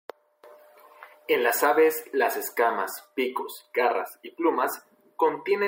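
No technical faults can be heard in this recording. There is no point in the speech that calls for a timestamp or comment.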